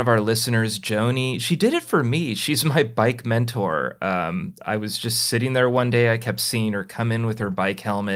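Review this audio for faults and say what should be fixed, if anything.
A lost packet rebuilt from error correction occurs from 7.35 to 7.57 s, just after "kept seeing her come": several packets went missing, and the decoder filled in about 120 ms from the low-bitrate copies carried in the following packets, so there's no gap, but that stretch sounds rougher and noisier. Reducing packet loss on the network path, for example with a wired connection or a larger jitter buffer, would prevent it.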